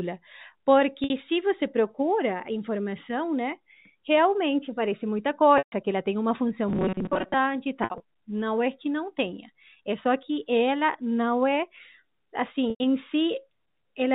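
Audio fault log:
1.04–1.10, 5.58–5.72, 7.84–8.00 and 12.70–12.80 s, packet loss with pitch repetition. Audio went missing, and the receiver looped the last pitch period to cover it. The first gap lasts 60 ms, just before "se você procura informação". The longest, 140 ms between "parece muita" and "que ela tem uma", holds a buzzy tone and then fades. At 7.84 s, 100 ms drops out in pieces over 160 ms. At 12.70 s the gap is 100 ms.
6.68–7.34 s, robotic sound from repeated short buffers. After "ela tem uma função" the sound turns into a rigid, metallic buzz at 188 Hz. The likely cause is audio arriving too rarely. The software filled the time by repeating a tiny stretch of sound, which fits a buffer of about 5.3 ms. Most of the real audio here is skipped. Each repeat imposes the same fixed pitch, so the sound only loosely tracks its original shape.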